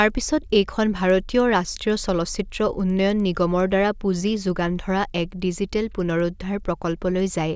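Throughout, there's a steady tick about ten times a second: the resampler restarted on every block, converting 24 kHz to 16 kHz in isolated 100 ms chunks, so each edge glitches.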